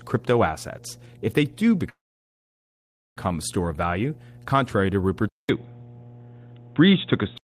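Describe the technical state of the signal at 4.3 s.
A steady low 60 Hz drone sits beneath the speech at 4.3 s, roughly 25 dB down: mains hum, present throughout, from power-line coupling through a ground loop or transformer.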